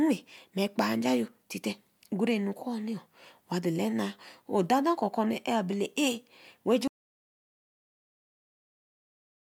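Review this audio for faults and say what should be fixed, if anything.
Audio dropout to silence at 6.88 s, lasting to the end of the clip: the speech stops mid-flow and is replaced by silence with no room tone, most likely because the input device or link was lost while the recorder kept writing silence. Whatever followed is gone and needs re-recording. To prevent it, secure cables and connections, disable auto-muting, and monitor input levels live during the take.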